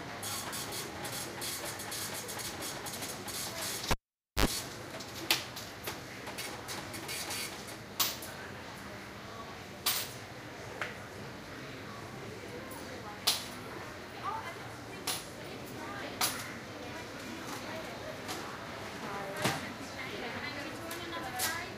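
At 3.91 s a cable is pulled and plugged in while live: a pop, then near silence for about 0.5 s, then 65 ms of 50 Hz mains buzz as the plug tip makes partial contact, and a second pop as the sound returns at 4.46 s.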